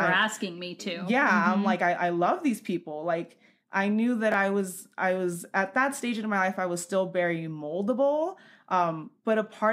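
At 4.32 to 4.34 s the speech has chunks out of order: one 10 ms block of audio was delivered or written one chunk late, so it plays after the block that should follow it. No audio is lost, but the swap leaves three hard joins in 20 ms, heard as a brief jumbled flicker. On a waveform, the cycles break at each seam; a spectrogram shows thin vertical broadband lines there.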